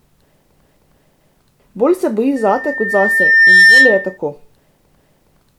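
Right after "se boji", at 2.36 s, a loudspeaker feedback squeal starts and lasts until 4.18 s. A single tone near 1.8 kHz swells over about one and a half seconds. It ends up around 10 dB louder than the speech. The microphone is picking up its own loudspeaker, and the loop runs away at that frequency.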